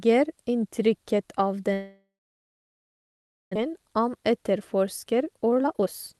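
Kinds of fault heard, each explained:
Long network dropout: from 1.73 s the sound decays into a fading buzz, then silence until 3.57 s; likely packets stopped arriving and were lost.
Jitter buffer speed-up: from 3.66 s speech sounds hurried at unchanged pitch, running at 122% as the receiver trims pitch periods to shed about half a second of backlog.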